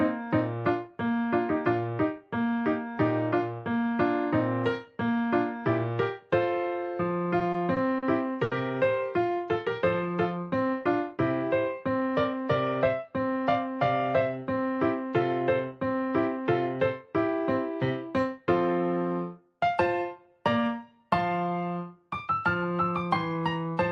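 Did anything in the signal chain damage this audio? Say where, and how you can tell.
Yes, at the network and jitter buffer stage. Between 7.39 and 8.04 s there's a stutter from repeated stalls: four brief holds, the longest 40 ms, about 90 ms of filler in all. Packets arrived late, the buffer kept draining, and the receiver stretched the last sound each time. Nothing is lost, but it drags.

Right after, from 8.44 to 8.53 s, there's a short stall from a late packet. The network delay jumped by about 70 ms, so one packet wasn't there in time and the receiver held the previous sound for 70 ms. You hear that sound hang slightly, then pick up from the same place.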